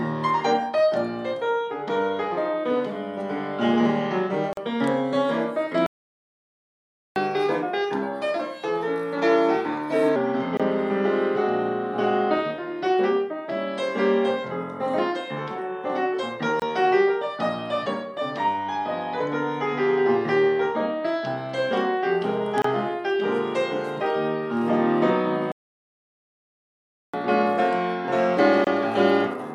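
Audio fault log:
4.53–4.57, 10.57–10.60, 16.60–16.62, 22.62–22.64 and 28.64–28.67 s: gap at a join of encoded pieces. Short silences open in continuous sound, repeating every 6 s. The first lasts 42 ms and the rest 24 ms. Each piece was encoded separately and joined untrimmed, so encoder delay and end padding remain. The edges are smeared by the codec.
5.86–7.16 and 25.52–27.14 s: playback stall. The sound halts mid-flow for 1.3 s, then 1.6 s, and resumes where it stopped. This is likely the player running out of data or its thread being blocked, leaving the output silent until it recovered.
7.16–10.16 and 27.14 s to the end: catch-up at higher speed. Right after each stall the sound runs 1.15 times too fast, about two semitones sharp. The player is resampling its backlog to win back lost time. The first stretch returns to normal speed at 10.16 s.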